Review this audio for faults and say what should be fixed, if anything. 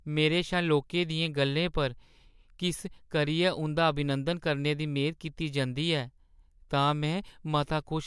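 Nothing here needs fixing, as the speech signal shows no technical faults anywhere in the recording.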